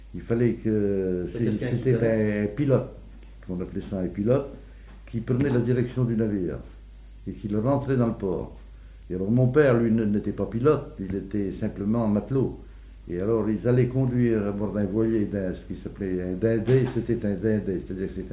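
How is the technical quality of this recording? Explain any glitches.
Nothing here calls for explanation, since no glitches, dropouts or other technical faults turn up anywhere in the recording.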